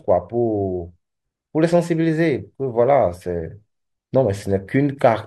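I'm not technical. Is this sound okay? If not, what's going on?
Yes, nothing wrong can be heard in this recording.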